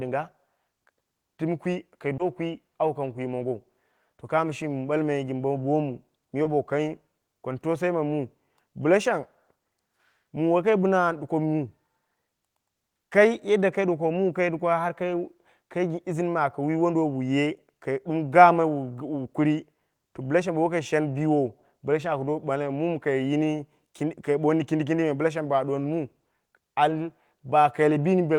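Twice in this speech, at 2.17 to 2.21 s and again at 6.43 to 6.47 s, short concealed packet loss occurs. Each time, about 20 ms of the call arrived too late for the decoder, so the receiver invented a 20 ms patch by extending what it had just played and then cross-faded back into the real signal. Each patch is heard as a fleeting smear or wobble in the voice.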